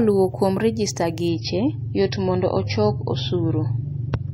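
At 1.28 s the speech suddenly turns dull and gritty and stays that way to the end. This is an adaptive stream at a lower bitrate: the player switched to a cheaper encoding when the connection slowed, and the sound points to a step down from about 128 kbit/s MP3 to around 24 kbit/s. Nothing remains above 5.9 kHz, and swirly codec artefacts appear. Unlike a dropout there is no gap, and unlike a plain low-pass filter the degradation includes warbling compression debris.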